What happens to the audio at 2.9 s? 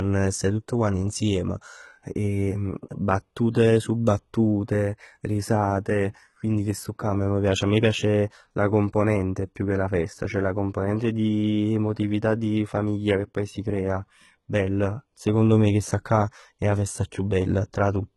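At 2.9 s you're hearing the same damage that runs through the whole clip, most likely HE-AAC compression. The treble is rebuilt from copied lower bands, so sibilants sound gritty and lispy, with nothing above 11.8 kHz, which fits roughly 16 kbps.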